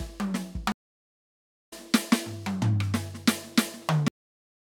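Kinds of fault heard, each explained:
Stream reconnect: The connection to the music stream dropped, so the player had nothing to play until it reconnected and started a new decoder partway through the stream. From 0.72 s there is about 0.97 s of silence, and when the music comes back at 1.73 s it has skipped ahead, resuming at roughly seven-tenths of a second later in the piece than where it broke off. The passage in between is simply missing.
Cut-off end: The final buffers of audio were never written out or played, so playback ends abruptly instead of finishing naturally. At 4.08 s the music stops in the middle of a sound and falls straight to digital silence, with no decay or ring-out, and that dead silence continues to the end of the clip. Whatever should have sounded in that last stretch is lost entirely.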